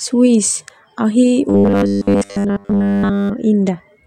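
From 1.49 to 3.30 s the speech turns into a rigid, metallic 100 Hz buzz that still loosely tracks the words: robotic sound from repeated short buffers. The likely cause is audio arriving too seldom, so essentially the whole stretch is a roughly 10 ms buffer replayed while real audio is skipped.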